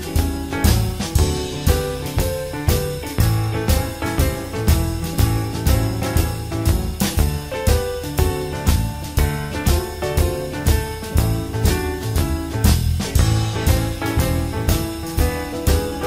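No fault can be heard anywhere in the recording.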